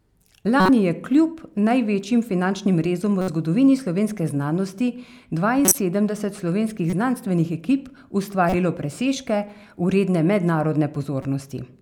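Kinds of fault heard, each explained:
Corrupt frame decoded: damaged bits inside compressed frames were played through by the decoder, so misread gains and codes threw energy into wrong frequency regions for the span of each bad frame. Six short chirps and noise bursts break into the speech, from 0.57 s just before "je kljub največjim finančnim" to 11.23 s, the loudest around 5.7 s. On a spectrogram each shows as a brief smeared block of misplaced energy; the waveform shows sudden spikes.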